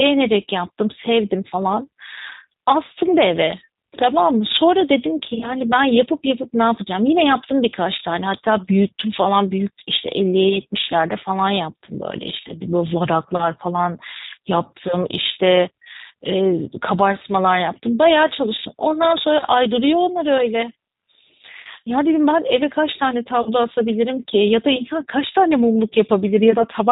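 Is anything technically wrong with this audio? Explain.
Yes. The whole clip has been through the G.729 codec, most likely the 8 kbit/s G.729A variant. It rebuilds the speech from a vocal-tract filter, a pitch predictor and a few pulses per frame, so nothing above 4 kHz survives and the speech sounds plainly rough and synthetic.

There's also VoIP packet loss concealed by the speech codec at 5.34–5.53 s, 12.48–12.54 s, 20.38–20.42 s, 23.42–23.50 s and 26.58–26.65 s. The decoder fills the gaps by stretching its last pitch and filter at falling gain, which gives a brief buzzy or noisy smear. The worst spots are 5.34 s, with about 50 ms missing in short bursts across 80 ms, and 23.42 s, where 40 ms are lost. Both stay weak or distorted for a moment after the audio returns.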